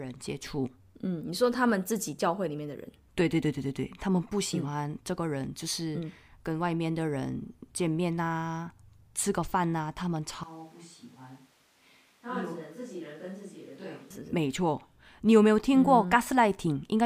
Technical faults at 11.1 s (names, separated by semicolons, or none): switch to a distant microphone